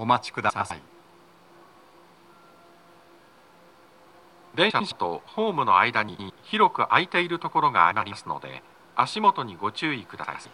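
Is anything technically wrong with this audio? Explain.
Yes. Frames out of order occur at 0.49–0.71, 3.21–3.43, 4.70–4.92, 6.08–6.30, 7.91–8.13 and 10.24–10.46 s. Two adjacent blocks of about 105 ms each, which fits runs of four frames, play swapped. Each stretch sounds like a garbled flutter.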